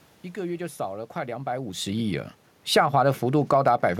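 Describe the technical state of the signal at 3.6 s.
The speech and its background room noise sink together by about 4 dB here, the automatic gain falling from 1.86 to 3.73 s after the gain control judged the input too loud or its background noise too strong.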